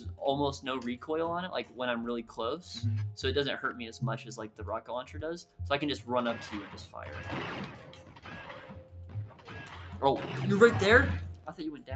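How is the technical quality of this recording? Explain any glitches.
The technical quality is compromised by a speech noise suppressor left running on non-speech audio, which repeatedly pulls down sustained parts of the sound.

Noise suppressor applied to music or sounds: throughout the clip, a suppressor built for speech treats steady tones and decaying tails as noise and attenuates them, swinging the level by roughly 10 dB. Attacks survive while sustained material sinks, so the sound pumps and thins rather than holding a steady body.

Sound cut by the noise suppressor: at 5.44–5.6 s, 6.7–6.95 s, 7.68–8.28 s, 8.58–9.53 s and 11.35–11.52 s, the suppressor misjudges stretches of the sound as noise and dips them by about 8 dB at the deepest. The longer spans around 8 to 9.5 s sag. The shorter ones register as brief dips.

The Opus call path is working normally, with nothing above 8 kHz.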